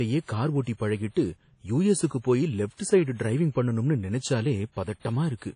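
Throughout the speech, the sound has a ringing, washy quality. A hiss rises and falls with the signal. Nothing is heard above 10.1 kHz, so the top end feels dull. The likely cause is WMA compression at a low bitrate, around 32 kbps. The transform encoder spreads its quantisation noise over tens of milliseconds around each sound. It also discards weak spectral detail. That smearing is plainly audible here.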